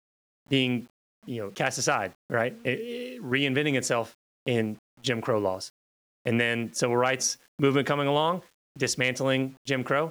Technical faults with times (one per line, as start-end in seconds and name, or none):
0.00-10.11 low bit depth without dither